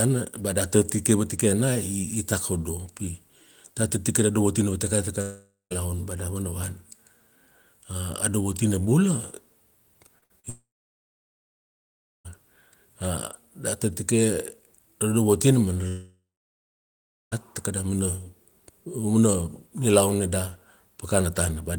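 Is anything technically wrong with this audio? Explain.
Yes. The speech has three long gaps and a cluster of brief glitches.

Long network dropout, at 5.21 to 5.73 s, 10.50 to 12.30 s and 15.88 to 17.34 s: each time the speech turns into a fading buzz or hiss, then dead silence. The silence lasts about 0.18 s, 1.6 s and 1.1 s respectively. The speech resumes further along, the third time at "takada mana". The likely cause is that audio stopped arriving for about 0.5 s, 1.76 s and 1.44 s, so the receiver stretched the last sound until it ran out. The missing stretch was never recovered.

Short concealed packet loss, at 10.19 s and 10.40 s: there are two quick smears or wobbles, about 31 ms and 39 ms, where the sound briefly blurs before blending back. In each case about 40 ms of audio failed to reach the decoder in time. The receiver extended the preceding sound, either from its pitch or as shaped noise, and blended it into the real signal.

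Burst of packet loss, at 10.24 to 10.32 s: right after the first glitch, about 60 ms of the sound becomes a held, softening buzz or hiss, and then the speech jumps ahead. Several consecutive packets were lost or arrived too late. The receiver continued the last sound and faded it across the gap, and the audio in between is simply gone. This run of glitches leads straight into the second long dropout.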